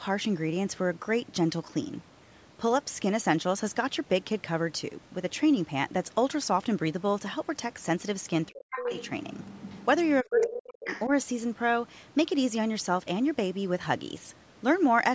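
From 8.5 to 8.92 s, and again from 10.23 to 11.1 s, the speech is suppressed in double talk. It drops by around 40 dB, likely because the echo canceller ducked it against the far end. The other side's voice leaks through at 8.71–9.09, 9.33–10.11, 10.41–10.5 and 10.88–11.06 s, ranging from faint to as loud as the talker. This is likely residual loudspeaker echo the canceller missed.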